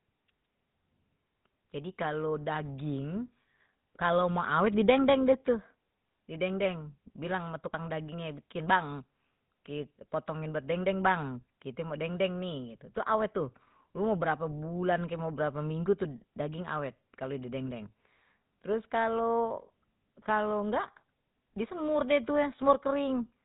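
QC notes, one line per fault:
Throughout: GSM full-rate codec. The speech has a plainly audible buzzy, gravelly roughness, and nothing comes through above about 3.8 kHz, so the top end sounds dull and boxed in. The codec models the vocal tract as a filter. It drives that filter with a sparse train of regular pulses rather than the real excitation. That coarse excitation gives the grainy buzz. The damage fits the low 13 kbps rate of the original GSM coder.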